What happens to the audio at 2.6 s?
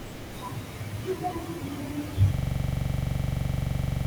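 At 2.6 s the audio is stuck in a system hang loop that runs from 2.34 s to the end. The system froze while the hardware kept replaying one 42.67 ms buffer, which fits a 2048-sample ring buffer. It repeats 40 times, a rapid mechanical stutter at 23.4 Hz.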